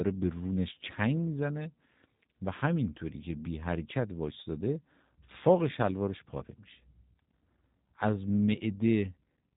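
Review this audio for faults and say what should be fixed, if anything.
G.729 codec damage runs through the whole recording: the speech is rebuilt from a vocal tract filter, pitch prediction and a few pulses per frame, giving a rough, synthetic edge that fits an 8 kbit/s G.729A link. A spectrogram shows nothing above 3.8 kHz. Carry the call on a wideband codec such as G.722 or Opus.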